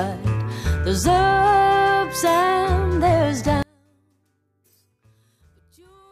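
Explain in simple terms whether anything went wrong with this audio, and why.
Something likely flipped one stereo channel upside down, a fault called one channel inverted. From 3.63 s to the end, that reversed channel fights the other one whenever the two are combined into a single mono signal, so anything placed in the middle cancels out. The sound suddenly drops to a faint trace, far quieter than before, with the centre almost gone.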